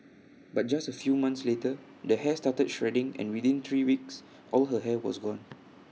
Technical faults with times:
0.00-1.00 channel delay (comb filtering)

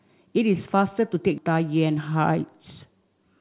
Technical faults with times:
1.38-1.54 skip ahead

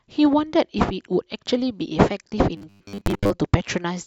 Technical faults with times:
2.57-3.30 robotic sound from repeated short buffers

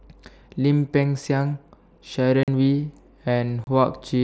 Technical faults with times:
2.43-2.48 unconcealed Bluetooth headset packet loss
3.64-3.67 unconcealed Bluetooth headset packet loss

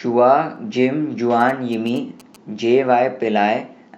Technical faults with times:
0.56 dropped samples
1.40-2.36 GSM signalling bursts
1.86 dropped samples

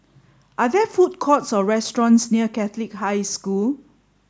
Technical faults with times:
none

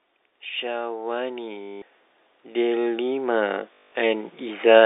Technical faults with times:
0.27-4.81 automatic gain rising
1.62-1.82 packet loss with last packet repeated
3.74-3.92 packet loss with last packet repeated

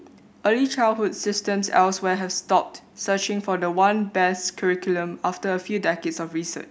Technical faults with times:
1.15-6.19 clock drift buffer slips

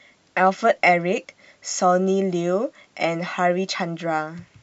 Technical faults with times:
none

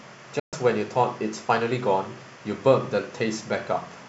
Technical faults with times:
0.39-0.53 digital broadcast dropout

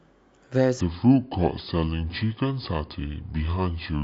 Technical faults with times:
0.81-4.04 section at the wrong speed

